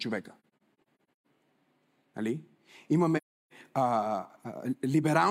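Between 0.41 and 1.26 s, and again from 3.17 to 3.53 s, the speech drops out in soft-faded gaps from AAC frame loss with muting. Zeroed spectra fade out and in across overlapping windows, leaving clean vertical blank bands on a spectrogram and tapered flat stretches in the waveform, the first scattered with runs up to roughly 150 ms.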